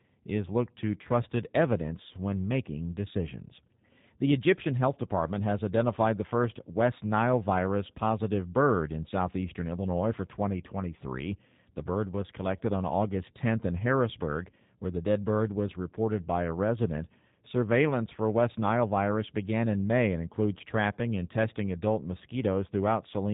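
From start to finish the speech carries the sound of the G.729 codec, its damage plainly audible. Nothing passes above about 3.8 kHz, and the voice sounds slightly rough and synthetic, as if rebuilt rather than recorded, which fits an 8 kbit/s G.729A stream. A plain low-pass filter or band-limited phone line would dull the top end but leave the voice natural. Here the grainy, buzzy texture marks coarse model-based coding.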